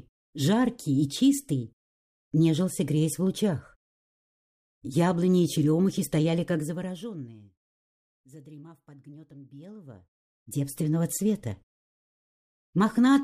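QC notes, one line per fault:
6.42–7.66 s, zipper noise: the level drops by roughly 25 dB in about 100 small stepped increments per second rather than a continuous ramp, so each unsmoothed jump leaves a tiny click and the fade carries an audible ticking, zipping texture.
9.51–10.80 s, zipper noise: the matching rise of roughly 25 dB is applied in the same coarse steps at around 100 per second with no interpolation between them, producing a rapid train of small discontinuities heard as a buzzy zip riding on the sound.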